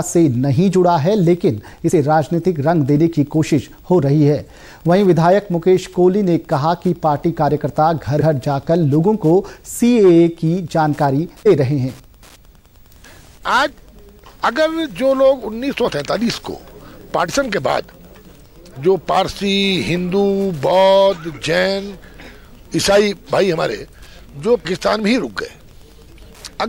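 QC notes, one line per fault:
Throughout, Wi-Fi interference: a faint tick about ten times a second, from the 102.4 ms beacon being rectified by the circuit, sitting roughly 40 dB below the audio.
8.20, 11.45, 15.82–15.90, 17.25–17.30 and 24.64, compressed frames skipped: the audio jumps ahead by roughly 50 to 100 ms as whole frames go missing.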